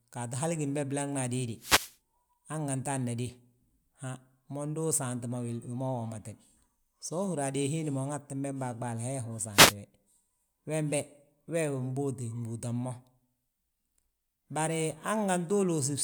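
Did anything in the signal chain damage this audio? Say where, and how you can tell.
Yes, at the wireless microphone's radio link, before the analogue input. Wireless microphone noise hits, heard as short bursts of static, occur from 1.55 to 1.97 s and from 9.52 to 9.75 s. The FM signal faded as reflections cancelled, so receiver hiss swelled up. Network packet loss would instead leave gaps or smeared, repeated fragments.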